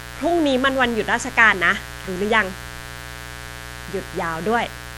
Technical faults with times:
0.00-4.98 mains buzz
0.00-4.98 MP3 compression

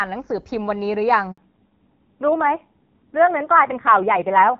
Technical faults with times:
1.31-1.37 handover gap
1.37-4.59 fallback to narrowband

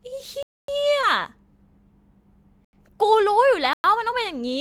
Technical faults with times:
0.43-0.68 block of digital silence
1.01-1.05 short concealed packet loss
2.65-2.73 block of digital silence
3.73-3.84 block of digital silence

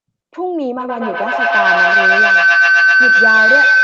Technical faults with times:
0.80-3.83 feedback howl

